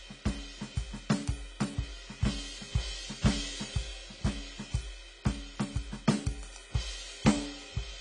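AAC compression is audible throughout the music, from start to finish. Nothing survives above 10 kHz, so the top end sounds dull and closed in, and the damage is plainly audible: sustained tones warble and high detail turns fizzy and smeared. The likely cause is AAC-LC coding at a low bitrate, consistent with about 24 kbps, where the encoder drops the cut-off and quantises the remaining bands so coarsely that gaps and substitute noise replace real content.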